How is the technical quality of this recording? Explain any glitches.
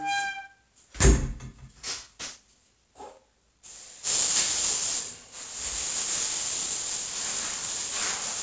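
The recording has a clear fault running through its full length: aliasing. The audio was taken down to a lower sample rate, which fits a drop from 44.1 kHz to 16 kHz, without first filtering out content above the new 8 kHz limit. Everything above 8 kHz folds back as false, unrelated frequencies, nearly as loud as the genuine sound, giving bright detail a gritty, metallic edge and packing energy hard against the top of the band.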